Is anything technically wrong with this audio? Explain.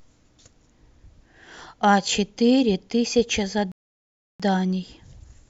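Yes. A rebuffering stall interrupts the speech from 3.72 to 4.40 s: the player ran out of downloaded audio, fell silent for 0.68 s, then resumed exactly where it stopped. Unlike a dropout, no audio is lost. The gap only adds time.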